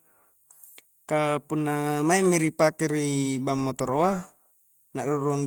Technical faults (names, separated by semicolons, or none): none